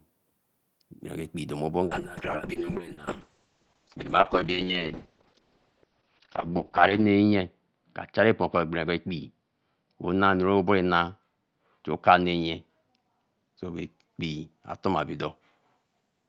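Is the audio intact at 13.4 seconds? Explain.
No. From 1.93 s to the end of the clip, a call bitrate drop is in effect: the encoder falls from 32 to 6 kbps and narrows its bandwidth from 20 kHz to 6 kHz. At 13.4 s the speech sounds coarse, watery and muffled.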